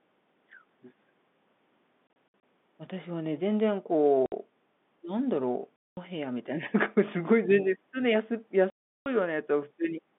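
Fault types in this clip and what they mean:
Packet loss filled with silence: chunks of the stream went missing and the receiver played nothing instead, so the speech drops out with hard edges. Gap lengths step in a way that fits 30 ms packets; the worst is a 360 ms hole at 8.7 s.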